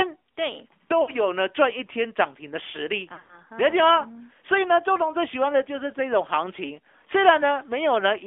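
The whole clip runs through the AMR narrowband mobile codec, squeezed into a phone line of roughly 250 Hz to 3.5 kHz. The speech has that buzzy, synthetic edge, which points to a mid-rate mode around 10 kbps. The vocal-tract model is clearly straining.

At 1.02 to 1.11 s there are lost AMR speech frames. The decoder bridges a 60 ms gap, which fits three dropped 20 ms frames, by repeating the last pitch and filter settings at sinking gain. You hear a short warbly dip.

A messier burst follows from 3.14 to 3.41 s, with losses scattered over about 160 ms and the longest run near 100 ms. The sound smears and sags toward silence, then comes back thin and rough for a moment.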